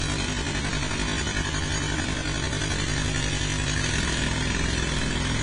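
From 0.0 to 3.8 s, software has likely stretched this time-stretched section to fill a longer slot, running it at about 0.54 times its original speed and holding pitch by repeating short slices of the audio. The pitch stays where it was, but everything unfolds at roughly half pace. At 3.8 s the pace jumps back to normal.

Across the whole clip, the audio was squeezed through a very low-bitrate encoder and then saved again as a high-bitrate MP3. This is low-bitrate audio saved at a high bitrate, and the first pass was likely an AAC encode at around 24 kbit/s. The larger second file cannot restore what that first pass discarded. Nothing is present above 10 kHz, so the top end sounds dull and closed-in. The artefacts left by the first encode persist throughout.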